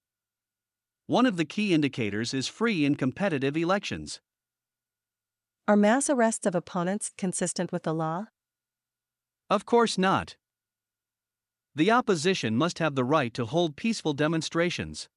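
Nothing here stands out as a technical fault; the speech runs along steadily with no glitches or interruptions to point to at any moment.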